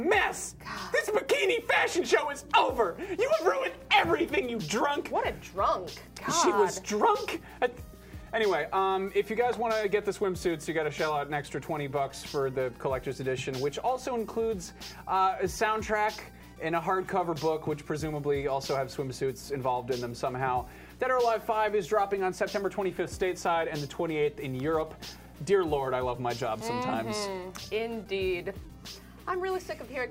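No technical faults detected.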